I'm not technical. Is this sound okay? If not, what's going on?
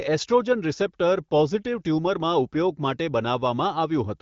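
Yes, this speech sounds fine; it has the familiar character of an HD Voice phone call, and there's nothing here to worry about.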